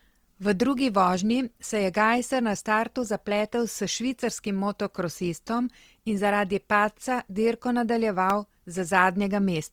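This is a speech clip. The whole recording sounds rough and grainy, with a noisy haze on the voice's tones, yet the full bandwidth is kept. That texture points to Opus compression, likely in its music mode, at a low rate near 24 kbps. Band energy survives but fine detail is filled in with noise. Near the end, between 8.30 and 8.62 s, three CD scratch ticks sound at a steady rhythm. Each is a tiny click, the longest under a millisecond. A damaged spot on the disc has defeated error correction on successive turns.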